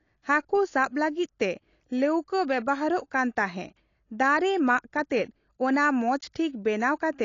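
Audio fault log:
throughout: AAC compression, likely AAC-LC around 32 kbps, removes everything above 7.2 kHz and quantises coarsely, so the speech sounds dull and smeared with plainly audible artefacts.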